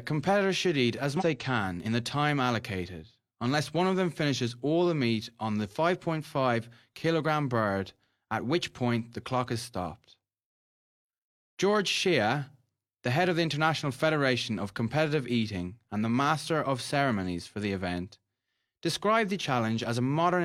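At 1.16 to 1.23 s, after "competitors should eat as", damaged data in the compressed stream knocks the decoder out of sync: a brief glitch before "they can in".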